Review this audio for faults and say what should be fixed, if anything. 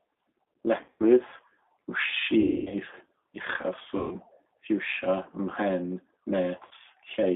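Rough, slightly synthetic speech confined to about 250 Hz to 3.6 kHz throughout: this is the G.729 codec at 8 kbit/s, rebuilding the voice from a filter, a pitch predictor and sparse pulses.

Buzzy, fading smears at 0.84–1.04 s, 2.40–2.77 s, 3.97–4.16 s and 6.67–6.73 s: this is VoIP packet loss concealed by the speech codec, which fills the gaps by extrapolating. The worst is a 260 ms run near 2.4 s.

To prevent both, send the call over a wideband codec on a network path with less loss, and use jitter buffering or forward error correction.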